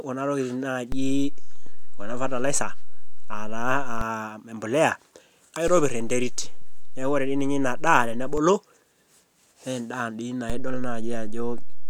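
Speech with a recurring DC step: right after "kuna tokitin" at 0.92 s the zero line jumps about -18 dBFS and holds until 4.01 s, again about -21 dBFS from 5.68 to 8.38 s, then about -18 dBFS from 10.50 s to the end, each shift thumping in and, for the first two, out.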